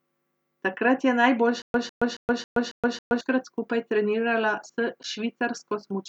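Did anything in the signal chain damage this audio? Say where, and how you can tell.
Yes. From 1.62 s to 3.21 s the speech hits a stutter with silent gaps: a 151 ms fragment repeats six times, each followed by about 123 ms of dead digital silence, so it pulses every 274 ms. That's likely a playback or stream stall replaying its last buffer, and the speech that should have filled that stretch is simply gone.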